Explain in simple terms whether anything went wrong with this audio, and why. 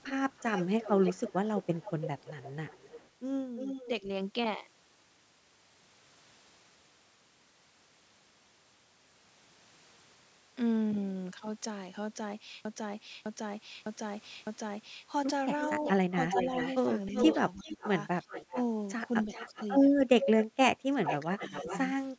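From 0.02 to 3.88 s, and again from 15.61 to 21.79 s, a delayed copy of the voice trails behind it. This is an echo leak. The copy lags about a third of a second at first, then about 0.38 s, and the second one is much louder. Its likely cause is a loudspeaker on the far side whose echo canceller let its own playback slip back into the call.

Around 3.85 to 4.08 s the voice dips briefly. From 16.31 s to the end it drops out far more deeply, for about 1.5 s in all. This is speech suppressed in double talk. Both sides were likely talking at once, and the echo canceller turned the voice down.

From 12.65 to 15.07 s, a 0.61-second piece repeats exactly, four times in a row. This is a broken-record loop. A stalled stream likely kept replaying its last fragment, and the audio that should have played there is lost.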